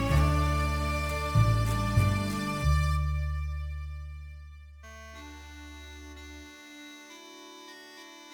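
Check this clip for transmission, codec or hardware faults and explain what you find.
One hardware fault runs through the whole music clip: sample clock jitter. The converter's clock wanders by several microseconds, so each sample lands slightly off time, leaving a hiss roughly 30 dB down that swells on loud, bright passages.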